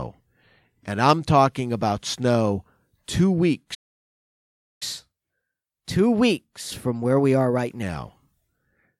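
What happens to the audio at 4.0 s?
At 4.0 s the speech is in the middle of a playback stall. The output drops to silence at 3.74 s and stays silent until 4.83 s, a gap of about 1.06 s, before the audio resumes. The sound cuts off mid-flow rather than fading. The likely cause is the player running out of buffered data, or its playback thread being blocked, so nothing was delivered to the output until it recovered.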